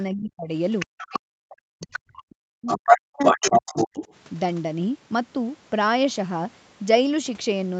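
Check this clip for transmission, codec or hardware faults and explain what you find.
Two related echo-canceller faults show up in the first four seconds of this speech: the talker's voice is repeatedly pushed down, and a second voice from the far end leaks through.

Speech suppressed in double talk occurs from 0.07 to 0.53 s, 0.85 to 1.96 s, 2.28 to 2.68 s and 2.84 to 4.02 s. The talker's level collapses by about 30 dB in the first stretch and about 40 dB in the later ones. The voice dips, loses its high end or cuts out in pieces. The likely cause is an echo canceller meeting simultaneous talk on both ends, failing to tell near speech from loudspeaker echo, and attenuating everything.

The other side's voice leaking through is heard from 0.79 to 1.19 s, 1.81 to 2.19 s, 2.66 to 2.99 s and 3.21 to 4.13 s, overlapping the suppressed stretches. This residual far-end speech sits between about 10 dB below and about 10 dB above the talker's level, loudest around 2.66 to 2.99 s. 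It comes through as a second voice. It is likely loudspeaker output that the canceller failed to subtract from the microphone signal.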